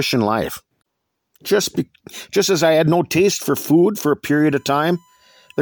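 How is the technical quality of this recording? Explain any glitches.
The speech clip has one fault, a USB whine near the end. From 4.26 s, just after "for food for a", until the clip ends at 5.62 s, a steady tone at 1 kHz sits under the speech, roughly 40 dB below it. A USB bus pulls current in bursts on a 1 ms frame cycle, and that periodic draw leaks into the audio path through shared power or ground. The result is a whine fixed at 1 kHz.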